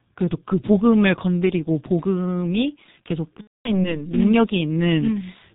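The whole speech clip carries heavy G.723.1 codec damage. At 6.3 kbit/s, the codec keeps nothing above 4 kHz. Its voice model updates only every 30 ms. So the speech sounds muffled and hoarse, and consonants smear together.

From 3.41 to 3.95 s comes VoIP packet loss concealed by the speech codec. About 240 ms of audio went missing, which fits eight lost 30 ms frames. The decoder repeats its last pitch and filter, so the voice stretches into a fading buzz or coloured noise. It stays weak or distorted after packets return.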